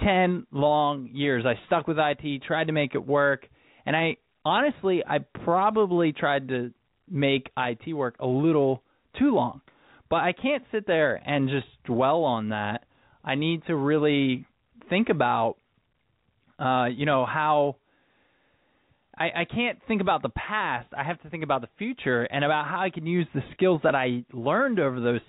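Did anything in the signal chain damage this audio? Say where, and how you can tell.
No, the speech comes through a G.711 telephone path that behaves as that format should, with nothing above 4 kHz and only the faint low-level noise of its logarithmic 8-bit coding riding under the signal and following its level.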